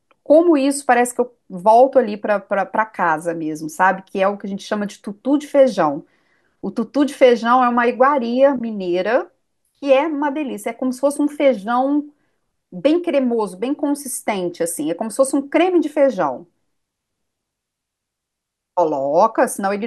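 A speech recording, and nothing in it is technically wrong.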